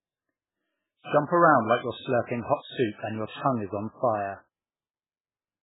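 From start to finish the speech is dull and watery, with nothing above 3.8 kHz, likely from heavy MP3 compression at a very low bitrate near 8 kbps. A spectrogram shows a flat ceiling at 3.8 kHz and patchy, flickering gaps below it.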